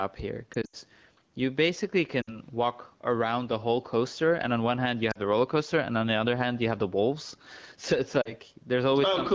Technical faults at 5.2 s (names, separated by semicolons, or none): gain pumping; lost AMR speech frames